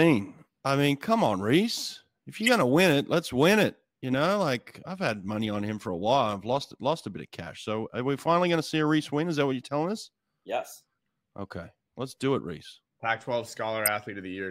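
At 2.42 to 2.49 s, just before "gonna win it let's", and again at 13.86 to 13.88 s, a corrupt frame decoded gives a chirp, squeak, blip or burst of noise near -10 dBFS. Flipped bits misplace energy for a few frames, showing as short, misplaced spectrogram streaks and waveform spikes.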